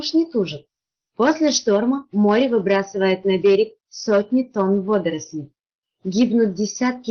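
Nothing is technically wrong with this audio, which comes through its call path as expected.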